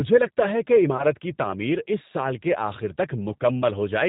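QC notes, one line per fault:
Throughout: G.729 codec, plainly audible at 8 kbit/s. Speech is rebuilt from a vocal tract filter and sparse pulses, so it sounds rough and synthetic with nothing above 4 kHz.
0.97–1.04 s: VoIP packet loss concealed by the speech codec. A short, fading extrapolation fills a gap consistent with two lost 10 ms frames, and the sound stays weakened briefly afterwards.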